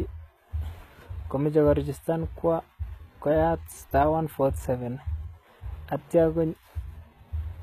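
Throughout, the speech carries HE-AAC compression, likely from a low-bitrate stream near 20 kbps. The treble is synthesised rather than muffled, so sibilants sound gritty and metallic, with nothing above 14.9 kHz.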